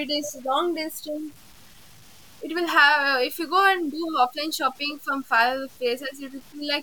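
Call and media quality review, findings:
Low bit depth without dither, throughout. Grainy, signal-following distortion on speech; quiet syllables and decays turn gritty and sputter toward silence. Error floor sits around 30 dB below the signal, which fits an 8-bit path. Likely cause: truncation to 8 bits with no dither at a format conversion stage, so quantisation error correlates with the waveform instead of forming a steady hiss.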